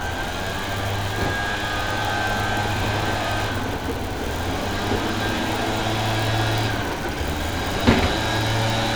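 A steady buzz at about 92 Hz runs under these sounds from start to finish, a rough, gritty hum that doesn't follow the material. It is a block size mismatch (truncated): one stage hands over blocks slightly longer than the next stage takes in, and the leftover tail of each block is discarded. Every cut repeats at the block rate, producing the buzz. The two sizes are so close that the timing stays at normal speed and pitch.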